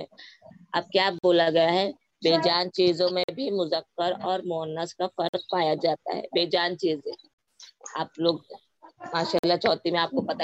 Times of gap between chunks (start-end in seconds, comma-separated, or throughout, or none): 1.19-1.24, 3.24-3.29, 5.29-5.34, 7.34-7.39, 9.39-9.44